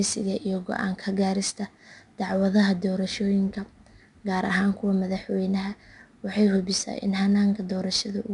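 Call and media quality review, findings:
4-bit ADPCM compression across the whole speech clip, plainly audible. Gritty hiss riding on every loud syllable, roughness on sharp onsets where the adaptive step lags. Nothing above 10.6 kHz, so a bit dull too. Rate points to roughly 89 kbps.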